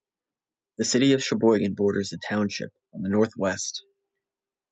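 From 0.91 s to 3.71 s, automatic gain rising lifts the speech and background together by about 5 dB, a slow swell through the Opus call path's 8 kHz band.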